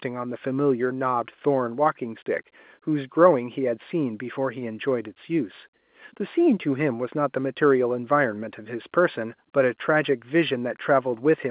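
Nothing in the speech recording is technically faulty. It carries the narrow sound of G.711 telephone coding at 8 kHz in mu-law form, with nothing above 4 kHz and a faint hiss that rises and falls with the level of the speech.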